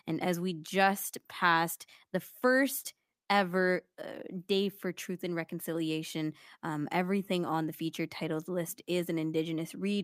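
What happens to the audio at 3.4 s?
Nothing goes wrong at 3.4 s; the speech there comes through intact, with no dropout, click, distortion or other fault.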